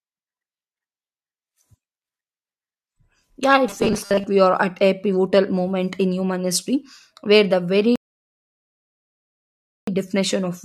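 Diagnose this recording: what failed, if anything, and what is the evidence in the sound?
Between "yeah it" and "we are at a" (3.67 to 4.25 s), speech turns into a rigid metallic 200 Hz buzz, likely robotic sound from repeated 5 ms driver buffers.

Silence from 7.96 to 9.87 s, then speech resumes exactly where it stopped: a rebuffering stall in playback, adding 1.92 s with nothing lost.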